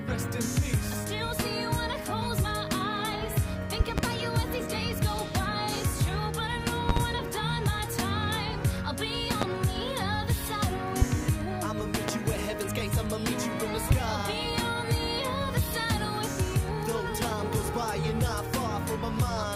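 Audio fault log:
3.80–4.01, 6.89–6.99, 9.42–9.45, 11.02–11.05, 12.08–12.11 and 13.91–13.94 s: loud pop. Sharp thumps, paired in the first two events and single thereafter, rise roughly 20 dB above the sound, which carries on underneath. They are likely voltage pulses from a plug, switch, static or driver glitch, shaped by downstream circuitry.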